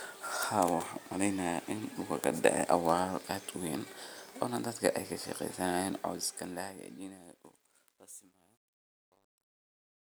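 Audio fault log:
5.96–10.08 s: truncation distortion on a fade. The fade-out from around 6 s is requantised without dither, which fits a stage keeping about 11 bits. From 6.96 s the tail turns gritty. The waveform shows stair-stepped square blocks, and the spectrogram shows broadband grainy hash.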